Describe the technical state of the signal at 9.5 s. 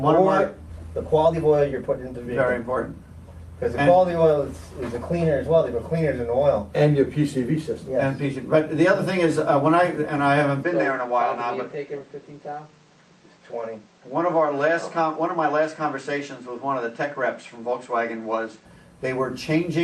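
Around 9.5 s the signal is intact, with no dropout, clipping, distortion or other audible fault at that point.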